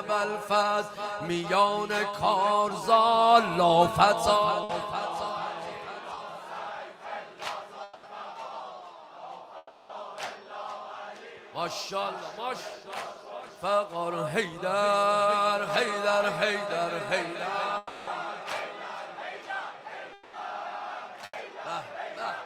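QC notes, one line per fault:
4.63–4.71 s and 21.25–21.35 s, burst of packet loss: the sound stretches into a held buzz or hiss that dims, for about 60 ms and then 80 ms, then resumes further on. A short run of packets went missing, so the receiver extended and faded the last sound while that audio was lost.
6.15–6.19 s, short concealed packet loss: a brief smear or wobble of about 20 ms. Audio arrived too late to decode, so the receiver continued the preceding sound to cover the hole and then blended back into the real signal.
7.83–8.05 s, 9.57–9.91 s, 17.77–18.09 s and 20.13–20.35 s, long network dropout: the sound freezes into a fading buzz or hiss lasting 200, 320, 300 and 200 ms, with about 20 ms of silence closing the one at 9.57 s, and then picks up further along. This likely reflects stretches where nothing arrived from the network. The receiver concealed the gaps, and the audio that went missing is never played.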